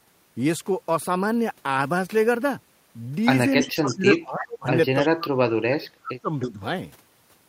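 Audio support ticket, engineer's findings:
Speech suppressed in double talk, 3.6–4.68 s and 5.02–6.61 s: talker dips about 20 dB, then about 35 dB, roughly a second each. Likely the echo canceller misreading double talk. Waveform shows notched, gated envelope; spectrogram shows thinned or blank upper bands.

Echo leak, 3.61–3.96, 4.13–4.19, 4.40–4.44, 5.03–5.08 and 6.41–6.47 s: faint copy of the voice, delayed 323 ms, about 15–25 dB under speech. Likely residual echo escaping the canceller. Spectrogram shows weak, time-shifted ghost harmonics.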